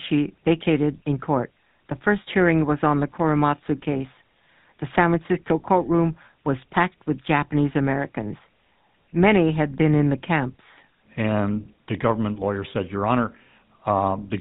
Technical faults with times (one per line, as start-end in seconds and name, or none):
0.00-14.41 GSM full-rate codec